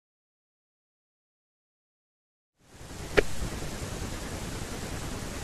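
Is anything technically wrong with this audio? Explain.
No, nothing in this speech recording is technically wrong, and the smooth rise in level from around 2.5 s to 3.25 s is an ordinary fade-in of the kind an editor would apply.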